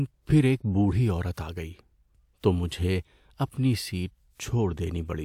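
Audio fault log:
Nothing stood out on listening to the speech.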